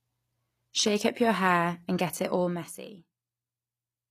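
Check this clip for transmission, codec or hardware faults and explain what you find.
One codec fault runs through the whole clip. HE-AAC compression, present throughout, is the likely cause of the damage: only the lower spectrum is coded, and the treble is regenerated by copying lower bands upward under a coarse envelope, which fits a low bitrate around 24 kbps. The rebuilt harmonics misalign, so sibilants in the speech sound gritty, metallic or lispy.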